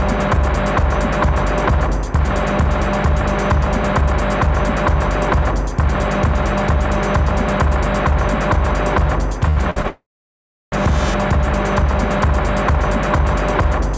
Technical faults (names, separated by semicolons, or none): short stall from a late packet; call audio freeze